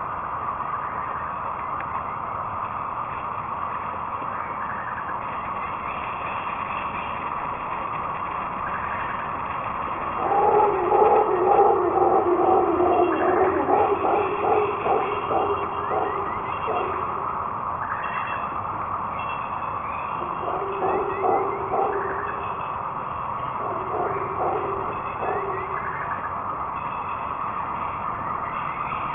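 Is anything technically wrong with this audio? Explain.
Yes, there's aliasing throughout. It sounds like a drop to a 6 kHz rate with no filter first, so everything above 3 kHz folds back as gritty, metallic tones roughly as loud as the sound itself.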